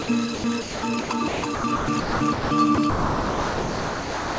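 Throughout the music, a second full-band copy trails roughly a third of a second behind at a few decibels lower, with no room decay. This is a doubled audio track, likely from a second capture path or misaligned edit. From 0.02 to 0.08 s, the opening 60 ms gives way to smooth synthetic noise, sound dropped by the voice detector, as the sender likely mistook the music for background and stopped transmitting. From 0.35 s to the end, the music repeatedly cuts out and returns, with about 2.7 s replaced by comfort noise. This is sound chopped by the voice detector, likely toggling on and off. Nothing above 8 kHz is present, which fits a G.722 call path.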